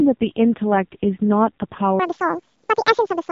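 From the start, the speech carries the sound of the AMR narrowband mobile codec. Nothing above about 4 kHz survives, and the voice comes out buzzy and synthetic. The encoder rebuilds speech from a vocal-tract model fed by only a few pulses every 5 ms, and the heavy damage here suggests one of AMR-NB's lowest modes, near 5 kbps. A plain low-pass filter would dull the sound without that rasping, artificial texture.

At 2.00 s, and running to the end at 3.32 s, a section at the wrong speed takes over. The speech rushes along at 1.96 times its proper rate, and its pitch jumps up by about ten semitones. The likely cause is playback or an edit clocked at the wrong rate. What separates this from a pitch shifter is that timing and pitch rise together and abruptly, so the voice turns both chipmunk-high and hurried.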